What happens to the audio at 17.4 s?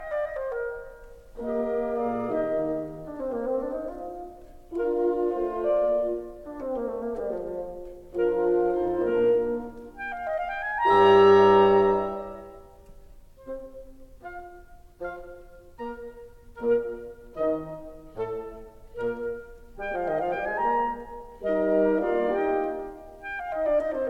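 Nothing goes wrong at 17.4 s; the music plays through that moment intact, with no dropout, click, glitch or other fault.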